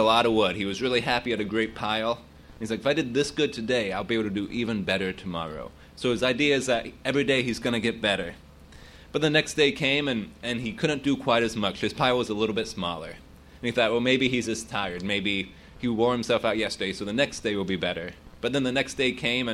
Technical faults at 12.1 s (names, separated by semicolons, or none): none